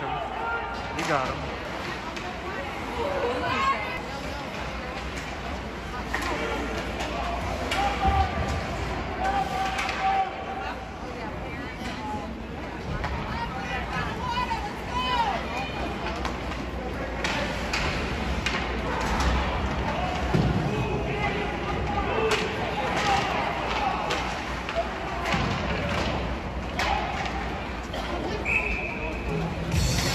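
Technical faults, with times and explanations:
1.65, 3.97, 11.29, 18.46 and 26.38 s: damaged data in the compressed stream. Each is a very short chirp or blip, over in a few milliseconds. At these points some bytes of the coded stream are wrong. The decoder cannot read those frames correctly. It loses its place and hunts for the next valid frame header. The garbled output from those misread frames is the blip.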